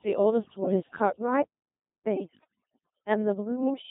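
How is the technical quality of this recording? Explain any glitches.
The technical quality is poor. Three faults are audible, two lasting the whole clip and one brief burst.

Overdone noise removal runs from start to finish. A noise reducer was set far too strong. It cuts any frequency band that sits near its noise estimate, and the quieter parts of the speech are cut along with the noise. The background drops and is dotted with small twinkling specks.

The whole clip also carries a Codec 2 vocoder sound, and the damage is heavy. This codec does not send the waveform. It sends only pitch, voicing, energy and a rough spectral outline, and the decoder rebuilds the speech from sine waves. The result is robotic and buzzy. The sound fits the 2.4 kbit/s mode.

Bit errors on digital voice radio hit between 0.70 and 0.80 s. At such a low rate, every bit sets pitch, level, voicing or spectrum for a whole frame. 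A few percent of flipped bits is enough to corrupt what sounds like about two frames. There the speech jumps in pitch and loudness. It breaks into a short warbling, bleeping garble.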